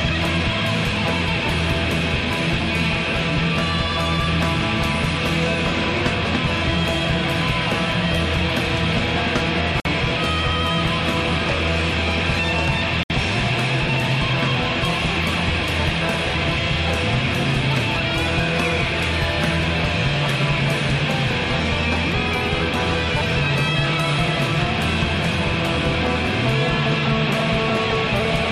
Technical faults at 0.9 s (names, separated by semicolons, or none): none